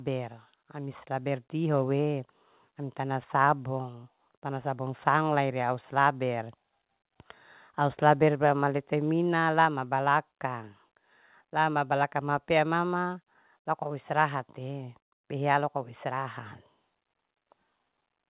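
A speech recording carried over a narrowband call path, with nothing above 4 kHz. The fault is automatic gain rising. From 0.72 s to 5.1 s the level climbs steadily by about 7 dB. The voice and the background noise swell together. The gain control judged the input too quiet and pushed its gain up slowly. The rise begins just before "ria au".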